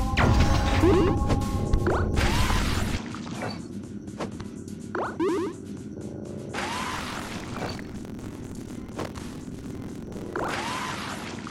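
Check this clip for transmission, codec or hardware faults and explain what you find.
Two faults are present. From 2.97 s to the end the sound abruptly dulls, with a narrower band and a level drop of about 10 dB. This is likely an input switched to a poorer device. There is no gap at the switch, and a new noise floor appears, which separates it from a codec bandwidth change.

From 6.90 to 10.53 s, buffer tearing produces a robotic 43.1 Hz buzz, which fits a 1024-sample buffer. Roughly a third of each buffer replays audio from about 50 ms earlier. The buzz sounds only with signal, unlike a steady hum.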